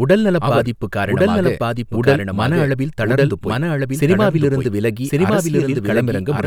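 From start to end, the speech carries a doubled audio track: a second, full-band copy trails about a second behind at roughly equal loudness, likely from the signal being captured twice through a slower path. It sounds like overlapping, echoing talk without reverberant decay. On a waveform or spectrogram, each pattern reappears intact one second later.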